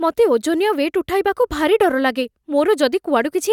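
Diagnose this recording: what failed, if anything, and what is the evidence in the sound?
Nothing failed here: no stage in the chain leaves a mark on the speech, and there is no event anywhere in the recording to point to.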